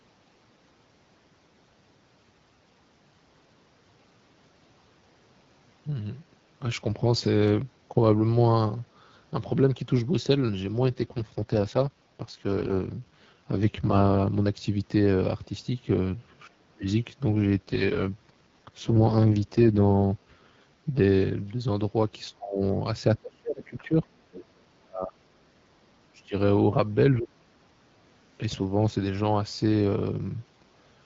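From 10.82 to 14.28 s, and again from 17.29 to 21.0 s, there's an AMR rate drop. The speech goes rougher and more synthetic with no gap or loss of band, which fits the wideband codec falling from 12.65 to 6.6 kbit/s while spending bits on error protection.

Starting at 16.47 to 16.86 s, the talker's speech dips hard, down by around 35 dB. The likely cause is the echo canceller clamping down during double talk, when both sides speak at once. The same suppression comes back at 22.3 to 22.62, 23.2 to 23.96, 24.79 to 26.35, 26.7 to 26.76 and 27.15 to 27.52 s. The dips range from slight to deep, and the one at 24.79 s is the longest, at about one and a half seconds.

Between 24.32 and 24.45 s, a brief scrap of the other side's voice leaks through, roughly 20 dB under the talker, likely loudspeaker echo the canceller missed.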